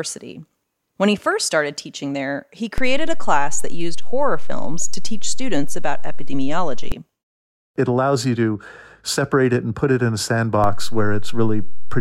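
A speech clip with two low thumps where the waveform's zero line suddenly jumps, a DC step. The first comes at 2.78 s, right after "started teaching there he", with an offset of about -11 dBFS that holds until 6.92 s and then drops back with a second thump. The second comes at 10.64 s, after "put it in a", at about -13 dBFS and holds to the end. Such jumps arise when a converter recalibrates or an offset input is switched in.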